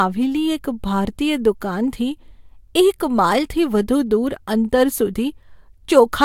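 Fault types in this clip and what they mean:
There are no fault types in this clip.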